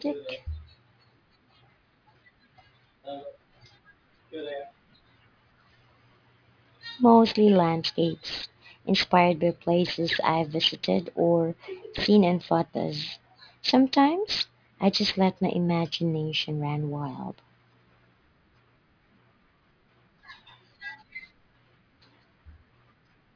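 Aliasing runs through the whole speech clip: the audio was resampled without an anti-alias filter, fitting a drop to 11 kHz, so content above 5.5 kHz folds back down. Sibilants turn gritty and metallic, with aliases roughly 10 dB below the signal; a spectrogram shows energy packed hard against a 5.5 kHz ceiling, with mirrored, unrelated components.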